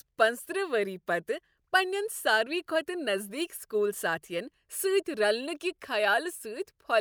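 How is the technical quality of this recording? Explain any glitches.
No technical faults are audible.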